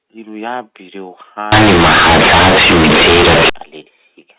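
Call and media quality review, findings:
Companded audio read as linear, 1.52 to 3.50 s. Very loud, buzzy distortion. Heavy noise in the pauses. Probable component: decoder or playback stage skipping G.711 expansion. A-law bytes played as raw 8-bit samples. Each sign change swings across half the output range. Quiet passages come out as loud as peaks. Waveform badly bent. Outside this span the A-law telephone path sounds as expected, band-limited below 4 kHz.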